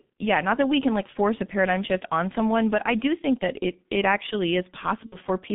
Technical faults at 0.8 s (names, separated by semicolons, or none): G.723.1 codec